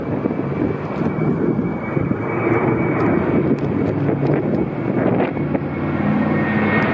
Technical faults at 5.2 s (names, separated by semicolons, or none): none